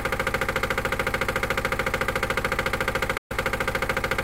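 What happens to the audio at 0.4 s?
Nothing goes wrong at 0.4 s; the audio is intact at that moment.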